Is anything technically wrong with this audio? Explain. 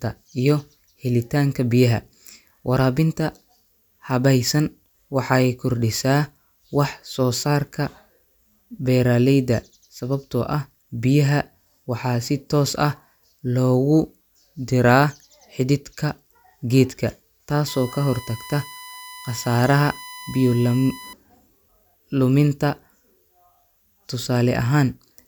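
Yes. From 17.68 s to 21.13 s a USB whine sits under the speech: a steady, fixed-pitch tone at 1 kHz, strongest at that fundamental and roughly 20 dB below the speech level. It comes from the USB bus drawing current in bursts at its 1 ms frame rate. That periodic load couples into the audio path through shared power or ground, so the interface picks up a 1 kHz tone that does not follow the speech.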